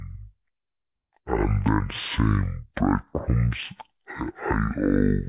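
Wrong sample rate throughout the clip: the speech plays at half its recorded rate, which fits 16 kHz material played at 8 kHz, so everything runs at half speed and a full octave low.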